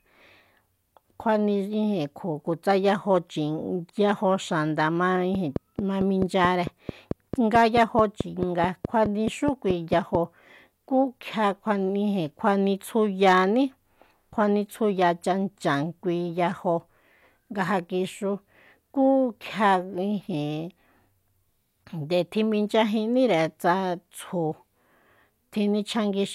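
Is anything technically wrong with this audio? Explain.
Yes. From 5.35 to 10.16 s there is a train of clicks: about twenty similar pulses at a steady 4.6 per second, standing well above the speech and continuing through pauses. The likely cause is electrical interference or a faulty connection or power supply. Unlike random crackle, the clicks keep the same shape and an even spacing.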